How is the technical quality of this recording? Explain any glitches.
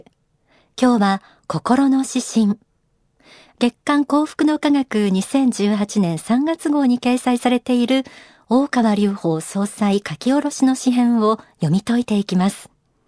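Nothing here stands out as a glitch; the recording holds steady all the way with no technical faults to point to.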